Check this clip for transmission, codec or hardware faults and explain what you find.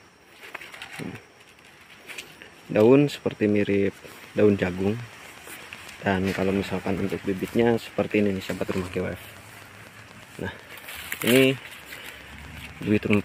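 One fault is present: a train of clicks from 3.49 s to 13.21 s. A steady ticking runs over the sound and through its pauses at about eight clicks per second, roughly seventy in all, each about as loud as the audio itself. The regular, same-shaped pulses point to likely interference from nearby equipment or a faulty connection.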